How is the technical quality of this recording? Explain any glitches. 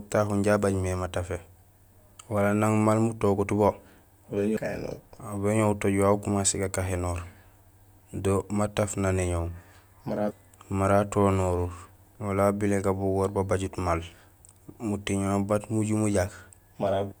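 The technical quality of this recording is sound, with no glitches to explain.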